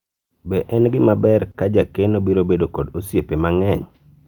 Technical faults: short stall from a late packet

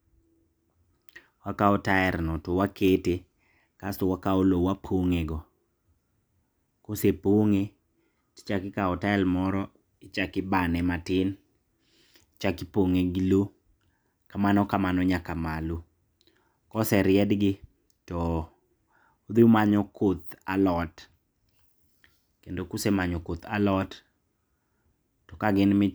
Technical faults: none

